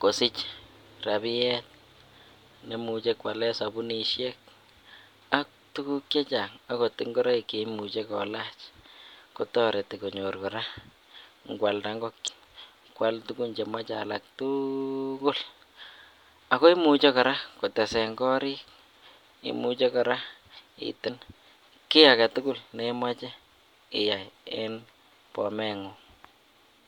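At 12.24 to 12.29 s and again at 21.04 to 21.09 s, damaged data in a compressed stream makes the decoder misread corrupted frames and lose sync, producing a brief blip of about 45 ms.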